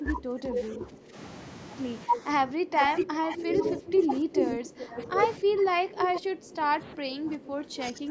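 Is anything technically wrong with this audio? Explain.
Yes, two problems are audible in this speech clip.

The first is speech suppressed in double talk. From the start to 1.15 s, and again from 2.06 s to the end, the voice keeps dipping in level, by as much as about 10 dB, sometimes thinning or breaking into pieces. The likely cause is the other side of the call talking at the same moment: the echo canceller could not tell this talker from its loudspeaker echo, so it pulled both down.

The second is echo leak. At 2.79 to 3.72 s, 4.34 to 5.03 s and 5.99 to 6.21 s, a second copy of the voice trails the original by 373 ms. It is somewhat quieter than the speech in the first and last stretches, and about as loud as the speech in the middle one. This likely comes from a loudspeaker on the far end whose microphone picked up the sound and whose echo canceller failed to remove it, so the delayed copy was sent back.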